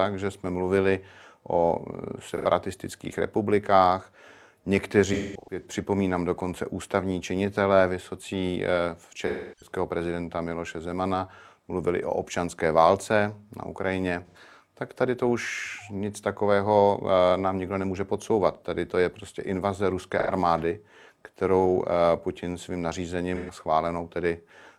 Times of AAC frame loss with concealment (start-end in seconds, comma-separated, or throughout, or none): 2.31-2.45, 5.13-5.66, 9.27-9.69, 14.26-14.37, 20.20-20.29, 23.35-23.51